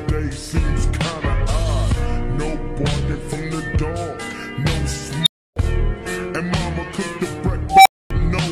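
The audio has a brief glitch from 3.32 to 3.34 s caused by damaged data in a compressed stream. Corrupted bytes there make the decoder misread frames and lose sync, and it skips ahead to the next valid frame header. Two unstable filter events follow. At 5.23 to 5.56 s, a tone around 4 kHz swells over about 35 ms, clips, and then drops into 300 ms of silence. At 7.69 to 8.11 s, a tone around 700 Hz grows more slowly over about 165 ms before clipping and a 250 ms dropout. In both cases a recursive filter running on bad coefficients lets its output grow until the numbers overflow, and the sound stays silent until the filter resets.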